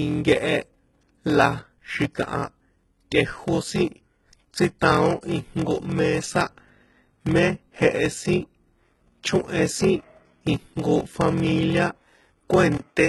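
Through the whole clip there's a block size mismatch (padded): each block arrives short of the 1024 samples the next stage reads, and the remainder gets zero-filled. That puts a buzz at 43.1 Hz under the speech and slows everything to 0.861 of normal speed.

Also throughout, the treble is gone above 11.8 kHz and what sits near the top is rebuilt rather than real, with heavy codec damage. That points to a low bitrate, around 16 kbps, with HE-AAC compression the likely cause. Its band replication copies lower bands upward, so the harmonics don't line up at the crossover.

At 3.11 s, right after "la xi̱kaha", there's pre-echo: a sharp attack landed late in a codec block, and quantisation noise sized for that loud moment spills about 10 ms ahead of it as a short hiss.

At 12.77 s the sound drops out for 20 ms and then comes back through a narrower band, with a different tone and a new noise floor well below the speech. 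The level stays about the same, and the input being switched to a poorer device is the likely explanation.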